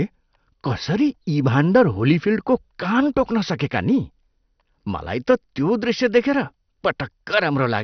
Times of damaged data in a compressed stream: none

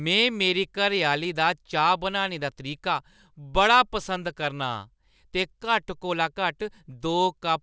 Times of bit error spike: none

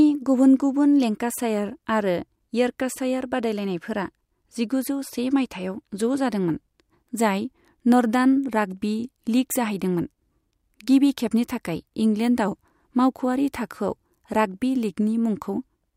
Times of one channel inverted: none

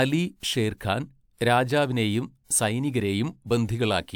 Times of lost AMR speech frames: none

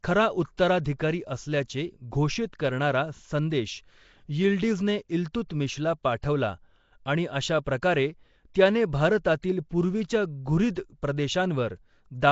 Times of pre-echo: 0.57, 8.54, 9.42

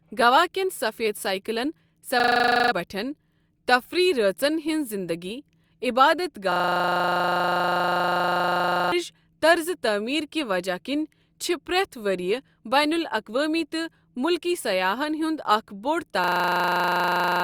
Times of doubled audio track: none

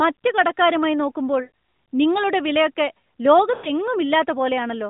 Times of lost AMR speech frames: 1.44-1.50, 3.54-3.69

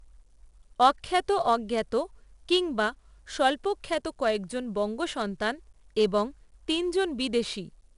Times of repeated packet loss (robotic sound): none

